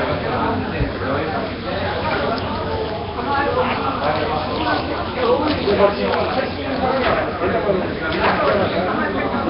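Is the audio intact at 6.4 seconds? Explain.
No, at 6.4 s the sound is rough and hissy, smeared, with nothing above 5.3 kHz, likely from Nellymoser compression. It runs throughout, starving weak bands of bits and filling them with noise.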